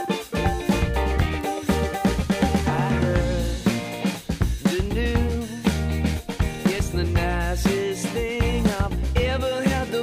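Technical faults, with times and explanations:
1.41 s, bit error spike: a single flipped bit in memory or on a digital link pushes one value far off by a power of two before it snaps back, which fits a single corrupted sample. It is heard as one sharp broadband tick, unrelated to the surrounding sound, peaking at about -20 dBFS.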